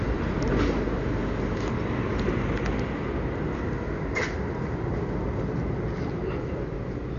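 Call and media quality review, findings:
Dolby Digital compression, likely, throughout: dull band-limited sound, nothing above 6.9 kHz, rough fluttering dither noise filling starved frequency lines; heavy damage fits a roughly 48 kbps AC-3 encode.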